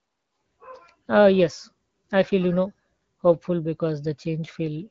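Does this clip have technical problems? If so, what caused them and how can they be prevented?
No, nothing here needs fixing; it's ordinary speech carried over an AMR wideband (HD Voice) link at 12.65 kbit/s, so the top end stops at around 7.6 kHz the way that kind of call normally does, and there's nothing to prevent.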